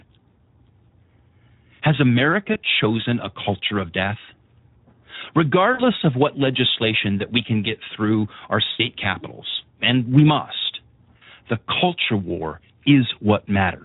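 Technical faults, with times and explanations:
throughout: Speex codec. Heavy CELP coding leaves too few bits for the excitation, so speech sounds noisy and hoarse, consistent with roughly 11 kbps.
2.53 to 11.24 s: VoIP packet loss concealed by the speech codec at 2.53–2.60, 5.73–5.84, 8.71–8.87 and 11.17–11.24 s. The decoder extrapolates from its last pitch and filter, fading the sound across gaps of 20 to 80 ms, which fits one to four lost frames.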